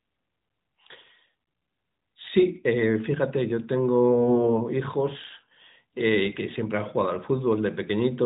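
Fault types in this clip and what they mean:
AMR bit errors: from 4.12 to 4.53 s the speech turns hoarse, scratchy and gargly while keeping its pitch and level, as roughly 7 percent of bits arrive flipped in the AMR-NB frames. Unlike packet loss, nothing drops out or repeats.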